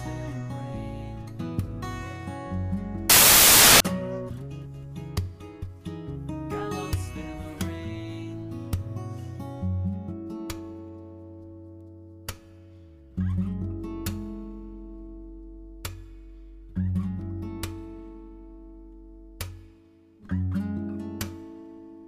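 Right around 3.10 s the audio suddenly turns into a blast of loud, harsh broadband noise, and it stays that way until about 3.80 s, so roughly 0.7 s. That's samples built from the wrong bytes: for that stretch the reader is assembling each sample incorrectly, whether off by a byte, with the byte order swapped or with the wrong alignment assumed. The jittery low-order bits end up as the big part of every value, so what comes out is loud, harsh noise in place of the audio.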